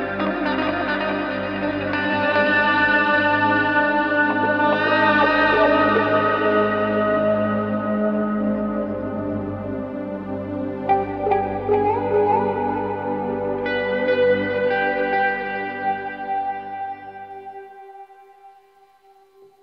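No dropouts, clicks, distortion or timing errors are audible anywhere in the clip.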